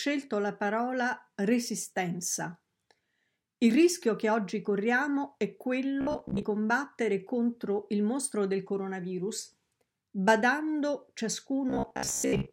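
Audio likely reached the playback stage too slowly twice, so a roughly 15 ms slice was looped to cover the gaps, giving robotic sound from repeated short buffers. From 6.01 to 6.43 s, about half the audio is replaced this way, and from 11.70 to 12.52 s most of it is. Each time the voice hardens into a rigid, metallic buzz fixed at 66.7 Hz, still loosely tracking the speech.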